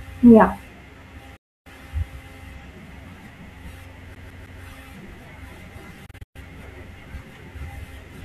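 Speech with two sudden silences and a stutter. At 1.36 s the sound fades out within about 8 ms and stays silent until 1.67 s, and at 6.06 to 6.36 s it breaks into several short holes, the longest about 120 ms, totalling about 192 ms. That is a digital broadcast dropout: the receiver muted while frames failed, and whatever was sent then is gone. The silences fit whole lost frames of 24 ms each. From 4.15 to 4.62 s, a 157 ms piece of audio repeats three times with a tiny mute at each jump, the quick, even stutter of a CD stuck on one turn, where a scratch throws the laser back to the same spot every revolution.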